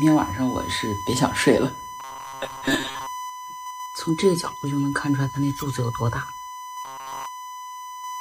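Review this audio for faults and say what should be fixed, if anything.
A USB whine runs through the whole clip as a steady tone at 1 kHz, sitting about 10 dB below the programme. The tone matches the 1 ms frame rate of the USB bus: current drawn in step with each frame leaks into the audio through the power supply or a shared ground. To prevent it, power the interface separately or break the ground path with an isolator or a cleaner hub.

From 2.00 to 3.07 s and again from 6.85 to 7.26 s, the sound turns rigid and metallic, with a fixed 134 Hz buzz laid over it. This is likely robotic sound from repeated short buffers. New audio arrived late, so the same short block of about 7.5 ms was played again and again while the real audio was skipped. Most of the material in those stretches is replaced by repeats. To prevent it, give the audio path larger buffers or relieve whatever is starving the audio thread of CPU time.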